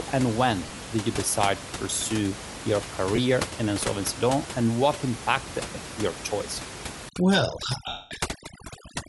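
Bluetooth LC3 compression runs through all of this speech recording. A grainy, breathy edge sits on the upper frequencies, likely from the LE Audio codec discarding high-band detail and filling it with noise, which fits about 48 kbps with 10 ms frames. Lost LE Audio frames break up the sound three times. From 0.66 to 0.78 s, just before "did you decide to", about 60 ms is missing in short scattered gaps, consistent with six 10 ms frames. At 3.16 s, between "decide to pursue your" and "in insolvency law and", there is a 20 ms gap. From 7.88 to 8.11 s, a 230 ms gap smears into noise and fades as the decoder repeats the last spectrum with scrambled phase. Overdone noise removal covers 7.09 s to the end, after "what impacted your choice". The room noise, about 10 dB below the speech, drops and breaks up into twinkling specks, and quiet parts of the speech are lost as those bands are gated out.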